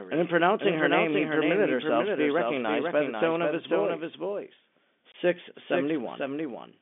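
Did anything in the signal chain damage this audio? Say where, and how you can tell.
Yes. Doubled audio track, throughout: a second full-band copy trails by about half a second, roughly 5 dB quieter, with no room colour. A duplicated capture path is the likely cause.

Packet loss filled with silence, at the network stage, from 5.12 to 5.14 s: a hard-edged 20 ms hole, which fits one lost packet replaced with silence on this telephone-band line.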